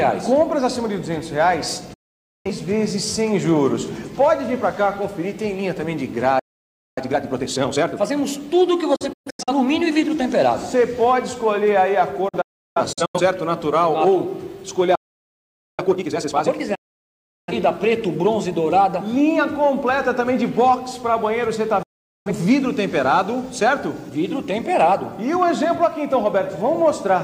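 The audio cuts abruptly to silence five times, each with a quick fade of about 8 ms: at 1.93 s for about 0.51 s, at 8.96 s as several short holes scattered over about half a second (the longest 0.13 s), at 12.28 s as broken holes spread over about 0.85 s (the longest 0.34 s), at 16.75 s for about 0.73 s, and at 21.83 s for about 0.43 s. These are digital broadcast dropouts. The receiver muted whenever frames failed to arrive intact, so the material sent during each gap is simply missing. Separately, the sound halts mid-flow at 6.39 s for 0.58 s and at 14.95 s for 0.83 s, then resumes. These are playback stalls, likely caused by the player running short of data. Each stall is followed by time-compressed catch-up, heard as hurried audio at normal pitch. This runs from 6.98 to 8.12 s at 1.5 times speed and from 15.79 to 16.61 s at double speed, as the player cuts and cross-fades small pieces to clear its backlog.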